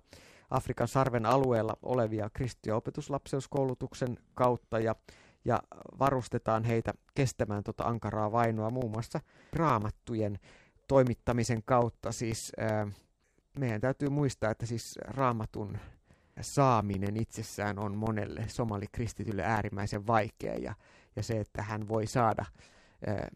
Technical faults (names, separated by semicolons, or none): periodic USB or driver dropouts